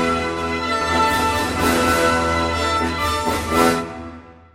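From 0.81 s to 2.77 s the audio is doubled. A second full-band copy trails the original by about 300 ms, at roughly equal level. It carries no decay or room colour, and starts and stops abruptly. A slower second capture path is the likely cause.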